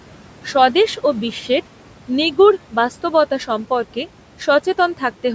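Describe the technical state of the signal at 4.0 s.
At 4.0 s the speech carries noise suppressor artifacts, present throughout the clip. The suppressor judges which frequency bands hold steady noise and pulls them down frame by frame, here by about 12 dB. The room noise, about 19 dB below the speech, keeps dipping between words and swelling back under them. The band ends near 8 kHz, as call microphone processing shapes it.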